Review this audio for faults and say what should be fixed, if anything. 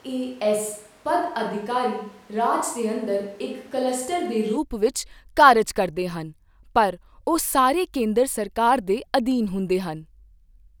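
The close microphone's signal was likely lost, so the clip opens on a switch to a distant microphone, lasting from 0.0 to 4.56 s, just before "ਵਿੱਚ ਕਾਰਜ ਕਰਦੇ ਹਨ". The speech sounds roomy and hollow, thinner in the bass and about 5 dB quieter, with room noise about 30 dB below it, then abruptly returns to close sound. Monitor the close microphone's feed while recording and rig a backup lavalier so a dropout never leaves only the distant microphone.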